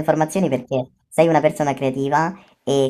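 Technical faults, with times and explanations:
Throughout, wrong sample rate: the speech runs about 1.38 times too fast and sits about 5.55 semitones high, sounding squeaky and hurried. Speed and pitch shift together by one ratio, which fits 32 kHz audio played back at 44.1 kHz without conversion.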